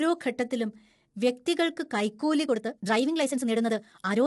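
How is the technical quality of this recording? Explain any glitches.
The recording has two clear technical problems: coarse, grainy compression throughout and a rushed final stretch.

Throughout, the speech sounds rough and grainy, with noise filling the gaps between harmonics and nothing above 11.6 kHz. This is likely low-delay AAC compression (AAC-ELD), whose short frames resolve pitch poorly. The plainly audible damage fits a bitrate around 32 kbps.

From 2.43 s, right after "ഘട്ടത്തിലും വ്യക്തികൾക്ക് കൈക്കൂലി", to the end, the pace suddenly jumps to about 1.65 times faster while pitch holds steady, sounding rushed. This is likely a time-stretched section, where software squeezed the audio by dropping short pieces to keep pitch unchanged.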